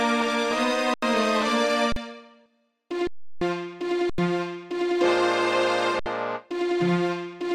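The output buffer ran dry five times, and each time the converter held its last sample value until data came back. This is an underrun with held sample. It sounds like a sudden flat stop with little or no click. The stops come at 0.94 s for 85 ms, at 1.92 s for 41 ms, and at 3.07 s for 341 ms. Then 4.10 s for 85 ms and 5.99 s for 65 ms. The 85 ms gaps fit a 4096-sample buffer. Live audio was lost each time, roughly 40 to 300 ms of it.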